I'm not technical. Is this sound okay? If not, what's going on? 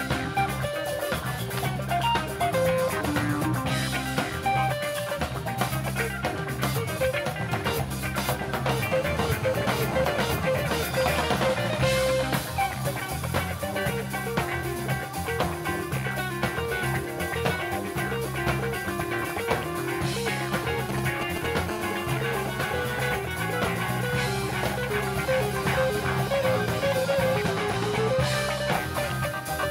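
No, it has a couple of interference problems, both from a 2G mobile phone near the recording gear.

From 8.87 to 10.64 s, and again from 21.71 to 23.19 s, there's a GSM phone buzz: a hard, raspy hum at about 217 times a second. The phone's radio pulses get picked up and turned into sound by the audio circuitry, so the buzz has nothing to do with what's being recorded.

Just before the second buzz, from 20.89 to 21.70 s, you get GSM signalling bursts: a galloping dit-dit-dit of short buzzes. That's the phone briefly talking to the network, as before a call or a text arrives, and then the steady buzz takes over.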